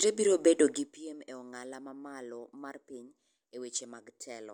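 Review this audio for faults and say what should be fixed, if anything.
Zipper noise runs from 0.70 to 1.06 s, just after "biro bedo": a roughly 15 dB drop applied in about 200 unsmoothed steps per second, each one ticking. Ramping the gain per sample instead of per block would prevent it.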